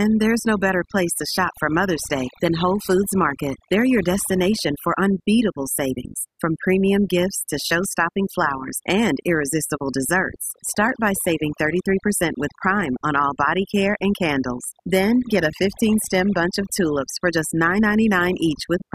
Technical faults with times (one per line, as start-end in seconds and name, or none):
0.00-18.94 overdone noise removal